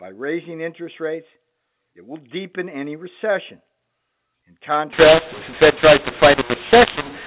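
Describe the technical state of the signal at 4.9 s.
At 4.93 s the speech hits a mu-law and A-law mix-up that lasts to the end of the clip at 7.26 s. The telephone audio was coded with A-law but is decoded as mu-law, so each 8-bit code maps to the wrong level. Some samples come out too loud, others too soft, and near-silent samples jump well above zero. The speech turns harsh and distorted, and pauses fill with noise. Before this point the band stops below 4 kHz, as expected from G.711 telephone coding.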